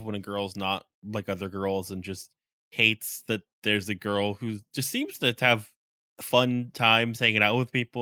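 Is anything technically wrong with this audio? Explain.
No, nothing technically wrong can be heard in this speech clip. There are no faults to report anywhere in it.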